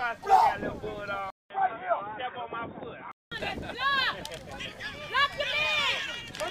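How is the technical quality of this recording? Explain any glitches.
The recording has one clear glitch: a stretch in the middle where the sound briefly comes from a worse source. From 1.30 to 3.32 s the input was likely switched to a poorer device. A gap of 200 ms marks the changeover, after which nothing above 3.8 kHz gets through, so the sound turns dull and boxy. It is also a little quieter and carries a faint new background noise. Unlike a simple filter or bandwidth drop, the silent gap and the shift in level and noise show a different device took over, and the original brightness returns at 3.32 s.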